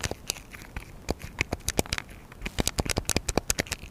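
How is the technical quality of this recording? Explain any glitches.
A steady ticking runs through the whole recording, about ten clicks a second, sitting roughly 30 dB below the main sound. This is Wi-Fi interference: a nearby Wi-Fi radio's beacon, sent every 102.4 ms, is picked up and rectified by the audio circuitry, so each transmission lands as a tick.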